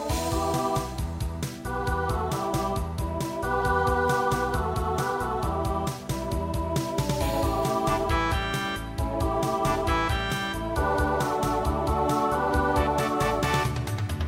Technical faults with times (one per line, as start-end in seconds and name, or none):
none